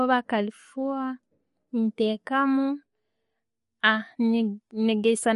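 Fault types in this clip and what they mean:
MP3 compression: watery, swirly speech with nothing above 11.2 kHz, likely from encoding near 47 kbps, where starved bits zero faint frequency lines and cut treble.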